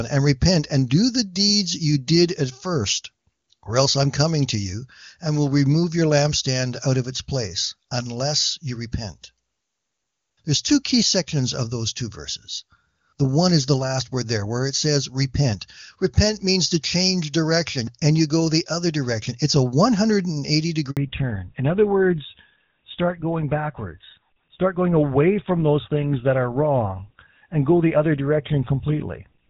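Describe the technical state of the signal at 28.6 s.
Fallback to narrowband is in effect at 28.6 s, running from 20.97 s to the end. The call has dropped from wideband HD Voice to an older narrowband codec, with a sound that fits GSM full rate. Nothing remains above 4 kHz, so the speech sounds duller and rougher.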